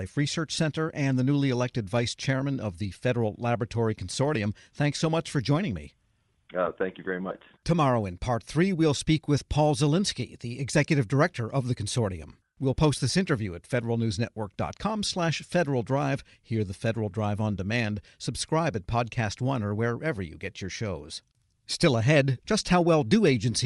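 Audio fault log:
throughout, Bluetooth LC3 compression: The speech carries a plainly audible breathy, grainy edge, likely from the LE Audio transform codec, where sparse upper-spectrum detail is replaced by synthetic noise. The damage level fits a bitrate of around 48 kbps with short 7.5 ms frames.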